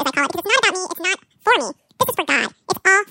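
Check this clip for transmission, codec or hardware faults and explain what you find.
The clip has one fault, present throughout: a wrong sample rate. The speech runs at 2.0 times normal speed and sits 12 semitones, a full octave, too high. That fits audio captured at about 22 kHz being played back at 44.1 kHz without conversion. On a spectrogram, harmonics and formants appear stretched to twice their normal frequencies and syllables look squeezed into half their normal duration. The voice sounds chipmunk-like and rushed.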